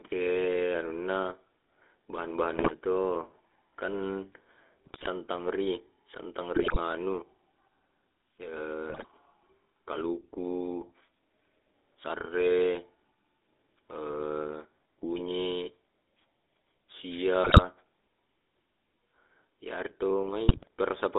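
Speech carried through the GSM full-rate codec throughout, with a buzzy, gravelly roughness and a band of about 250 Hz to 3.6 kHz, harsher than the smoother sound of later mobile codecs. GSM bit errors break in at 2.57–2.71 s (just before "to kan"), 4.85–5.07 s, 6.55–6.77 s, 8.90–9.05 s, 17.44–17.62 s and 20.48–20.68 s as squawks, pops and gargling from corrupted filter, pitch and gain values, rather than the silent gaps that lost frames leave.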